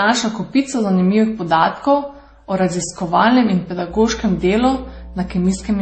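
From the very start, the speech carries a mix of codec artefacts heard together, with nothing above 8.3 kHz. That mix of artefacts sounds like transcoding between lossy codecs, likely a low-bitrate MP3 passed through something like WMA and back into MP3, with each pass piling its own damage onto the last.

At 3.88 s, mains hum comes in and stays until the end: a steady 60 Hz tone sitting about 15 dB below the speech. It's the kind of buzz you'd expect from a ground loop or a transformer leaking power-line noise into the signal path.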